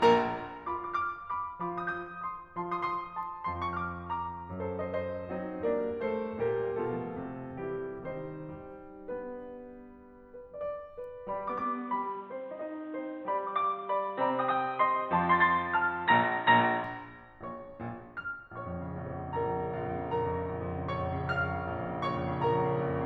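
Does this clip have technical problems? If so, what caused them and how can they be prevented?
Yes. From 11.62 to 16.84 s the music loses everything above 4 kHz and gains a noise floor roughly 35 dB down, likely from the input switching to a poorer device. Preventing this means locking the recording input so the system cannot change devices mid-take.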